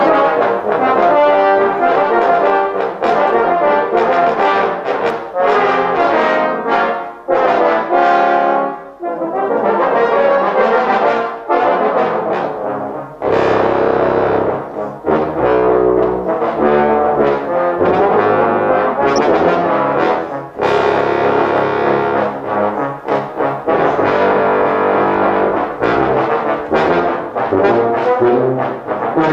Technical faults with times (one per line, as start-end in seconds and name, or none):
19.16-19.20 DAB burbling